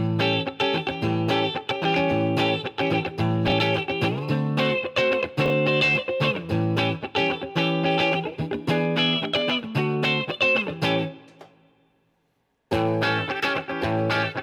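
At 3.48 to 3.52 s and again at 5.46 to 5.50 s the audio briefly jumbles, a case of chunks out of order. In each spot a 20 ms chunk arrives one chunk late and plays after the one that should follow it, leaving three hard joins. Unlike a dropout or a repeated buffer, nothing goes missing and nothing plays twice. The same material simply comes in the wrong sequence.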